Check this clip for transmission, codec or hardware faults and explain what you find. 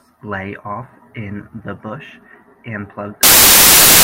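One fault is present: samples built from the wrong bytes, from 3.23 s to the end of the clip at 4.04 s, right after "in the bush and". Here the decoder assembles each sample from misaligned or swapped bytes, so the rapidly fluctuating low-order bits land in the most significant position. The speech is overlaid with loud, harsh broadband noise for that final stretch, close to white on the louder sounds.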